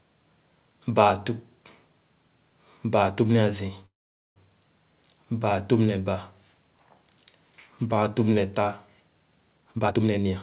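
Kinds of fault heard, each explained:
Call audio freeze: from 3.86 to 4.38 s the stream halts and the last sound decays into nearly half a second of silence, likely late packets emptying the jitter buffer, a flat gap on the waveform.
Jitter buffer speed-up: from 9.57 to 10.26 s short pitch-period slices are dropped to shed roughly 0.4 s of backlog, running at 154% speed with pitch unchanged, syllables compressed in time on a spectrogram.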